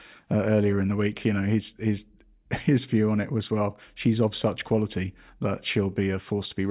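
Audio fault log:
Nothing stood out on listening to this speech recording.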